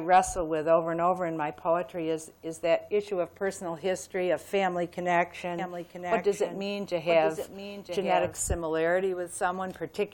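From 5.59 s to 8.43 s the sound carries a doubled audio track: a second, full-band copy trails the original by about a second, roughly 5 dB quieter. It is most likely caused by a slower capture path or a misaligned edit. The copy is dry, with no decay or room colour, and cuts in and out abruptly. A spectrogram shows the same patterns repeated one second later, and the waveform shows a fainter duplicate overlapping the original.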